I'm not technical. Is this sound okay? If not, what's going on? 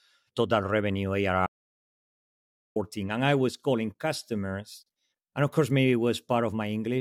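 No. Right after "total revenue", the speech cuts to dead silence from 1.47 to 2.76 s. That's an audio dropout to silence, likely from the input briefly disconnecting or muting.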